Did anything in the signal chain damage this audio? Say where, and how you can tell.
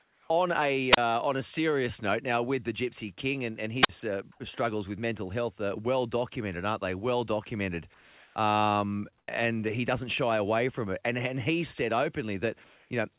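Yes. Two kinds of fault show up.

Comfort noise replaces the background at 0.0–0.3 s, 4.32–4.4 s, 7.94–8.36 s, 9.18–9.28 s and 12.64–12.9 s. In those pauses the room detail vanishes and a flat, featureless hiss takes over. It drops by about 4 dB in the first two, about 2 dB at 7.94 s, and holds level in the last two. The likely cause is discontinuous transmission in call processing: the sender goes quiet and the receiver synthesises stand-in noise.

There is also a wireless microphone squelch dropout at 0.92–0.97 s and again at 3.82–3.89 s. Each one is a short hole of near silence, 29 ms and then 49 ms long, with a brief rise of hiss before it. This happens at the radio front end, before any digital stage. The FM signal fades, the receiver's squelch mutes the output, and the sound returns once the carrier recovers. The call path's band limit, with nothing above 4 kHz, fits G.711 and is not part of either fault.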